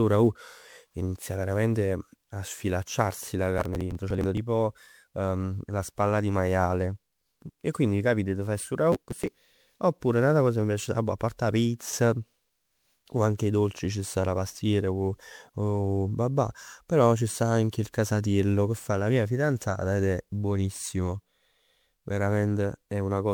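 Right through the speech there's a swirly, hollow smear with blurred attacks and nothing above 20.6 kHz. That's generation loss, likely from around ten MP3 passes at 128 kbit/s.

Then processor overload crackle tears through at 3.58–4.37 s, after "veramente a sfilacciarsi la", and again at 8.92–9.33 s, between "capit t' faje stu" and "oppure n'ata cosa che". Missed buffers of roughly 10 ms are just skipped, giving gritty bursts.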